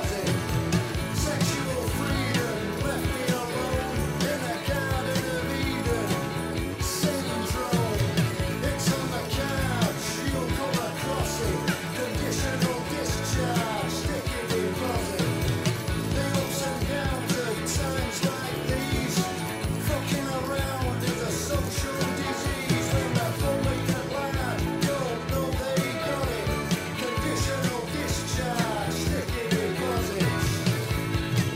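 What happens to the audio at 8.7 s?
Nothing goes wrong at 8.7 s; the audio plays through that moment intact, with no dropout, click, distortion or other fault to be heard.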